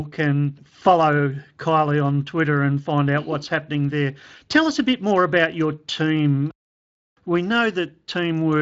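Nothing in this speech recording points to a technical fault, and the signal holds steady throughout.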